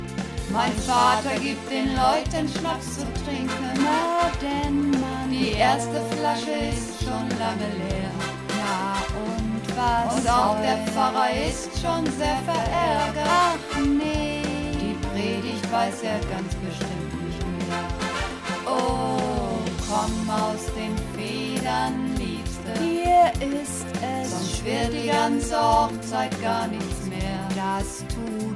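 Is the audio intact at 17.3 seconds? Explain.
Yes, at 17.3 seconds the audio is intact, with no dropout, click, distortion or other fault at that moment.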